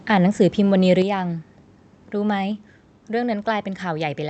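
At 1.02 s the speech and the background drop together by about 6 dB in a single sudden step. This is likely a microphone volume stepped down, where the call software lowered the device's input gain at once. The Opus call path stays band-limited to about 8 kHz throughout.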